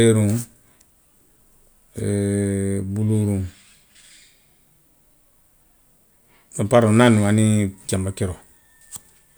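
Nothing in this bit of speech stands out as a technical fault, so there's no problem here to point to.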